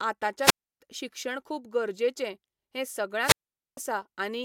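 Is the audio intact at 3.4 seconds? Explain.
No, a wireless microphone squelch dropout runs from 3.21 to 3.78 s. The radio signal fades, hiss rises, then the receiver mutes for about 0.45 s, leaving a flat, blank gap on the waveform and spectrogram.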